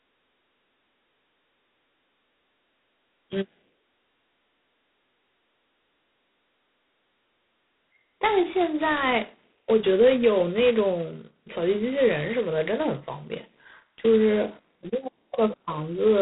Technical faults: G.726 ADPCM

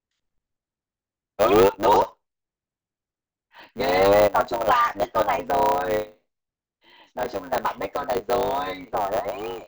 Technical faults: block size mismatch (truncated)

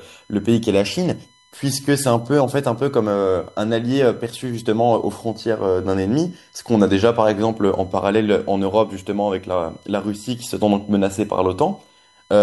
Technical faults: USB whine

